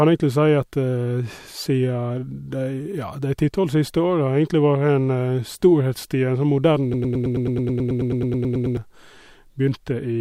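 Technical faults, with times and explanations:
6.94 to 8.77 s, broken-record loop: a fragment of speech about 108 ms long repeats exactly, back to back, 17 times, giving a rapid mechanical stutter in place of the speech that should continue. The likely cause is a player, encoder or stream stalling and resending the last piece of audio it still held until new data arrived. The audio that belonged in those 1.8 seconds is lost rather than delayed.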